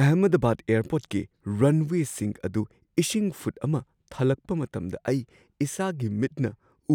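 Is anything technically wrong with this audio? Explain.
No, nothing technically wrong can be heard here.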